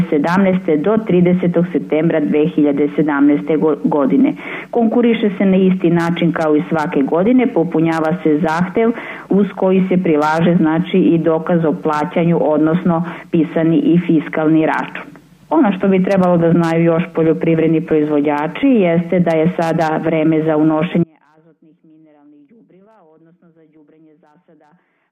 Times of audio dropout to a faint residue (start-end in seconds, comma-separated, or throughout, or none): 21.04-25.11